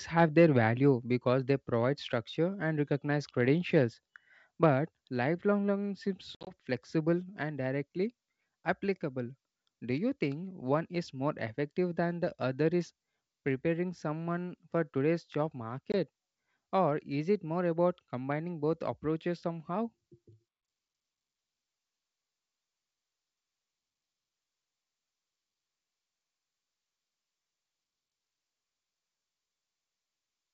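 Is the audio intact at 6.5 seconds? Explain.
No. Packet loss on an ADPCM call affects 6.35 to 6.53 s, between "learning seems" and "flexible and directly applicable". About 90 ms of audio drops out across roughly 120 ms, with the longest gap 60 ms. The gaps are filled with silence, which leaves the decoder's predictor and step size out of step with the sender's. Speech resumes slightly distorted and settles within some tens of milliseconds. The waveform shows flat, hard-edged holes, and the spectrogram shows blank vertical bands with broadband streaks at the edges.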